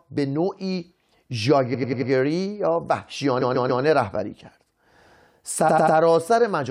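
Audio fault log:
1.73–2.10 s, 3.40–3.82 s, 5.68–5.96 s: repeated frames. Blocks of about 93, 139 and 93 ms replay four, three and three extra times. Each stutters and lengthens the speech.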